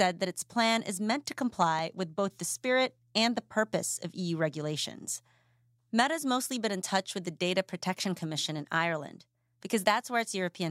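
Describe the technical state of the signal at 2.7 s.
At 2.7 s the speech signal is intact, with no audible dropout, clipping, distortion or other technical fault.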